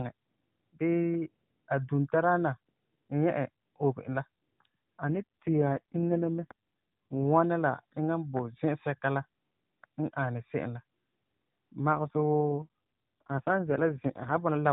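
Speech over a narrowband mobile link, with nothing above 4 kHz and only light codec colouring at the normal rate. There are two AMR rate drops, from 5.06 to 7.24 s (ending just before "wɔna la eŋa") and from 11.92 to 14.38 s. In both, the voice goes buzzy and synthetic with no gap or change in bandwidth, which fits the network pushing the codec down from 12.2 to 4.75 kbps to protect a weak radio link.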